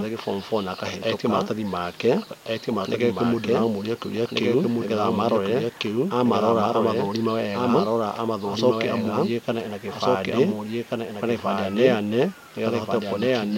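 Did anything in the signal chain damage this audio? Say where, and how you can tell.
Yes, a doubled audio track runs throughout the speech: a full-band second copy trails about one and a half seconds behind at roughly equal level, with no decay or room colouring, unlike echo or reverb. The likely cause is a second, slower capture path or misaligned edit layers.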